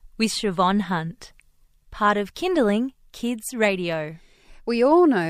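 No technical faults are audible.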